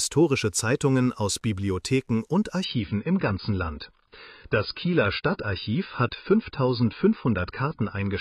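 At 2.64 s the quality falls away abruptly and stays down until the end at about 8.2 s, which is the adaptive stream switching to a lower bitrate. The connection most likely slowed, so the player swapped to a leaner encode without leaving any gap. Everything above 5 kHz is gone, so the sound turns dull and smeary, with more codec artefacts. It's consistent with AAC stepping down from roughly 96 to 16 kbit/s.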